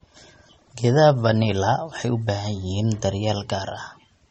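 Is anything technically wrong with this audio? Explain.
Yes. Throughout the speech there's a hard ceiling around 8.4 kHz, with nothing above it, and the top end has that smeared, swirly quality you get from heavy MP3 compression. This is likely low-bitrate audio saved at a high bitrate: the sound points to an MP3 at around 32 kbit/s later re-encoded at something like 256 kbit/s. The bigger second encode can't bring back what the first one stripped out, so the dull, band-limited character stays.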